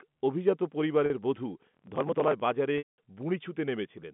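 At 1.06 s, packet loss with pitch repetition begins. About 40 ms of audio goes missing, to 1.10 s. That loss fits two 20 ms packets. The receiver fills the gap by repeating the last pitch period. A gap this short never fades fully. It sounds like a brief held, buzzy tone in the speech. The voice then picks up again with a quick cross-fade.

From 1.59 s to 2.40 s, processor overload crackle rides on the speech. The processor is failing to finish its small audio buffers in time. Each buffer points to a length of about 5 ms. Around fifty deadlines are missed. Each missed buffer is skipped outright, leaving a tiny hard-edged gap. Together these gaps make a gritty, tearing crackle. It stops once the load passes.

At 2.78 s, packet loss with pitch repetition returns, and this time it is longer. About 200 ms is lost, to 2.98 s. That fits ten 20 ms packets. The repeated pitch period holds briefly. 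It then fades out over roughly 50 ms. The rest of the gap is silent. Speech resumes with a short cross-fade. Throughout the clip, the G.711 telephone coding keeps the sound within the narrow phone band of about 150 Hz to 3.5 kHz.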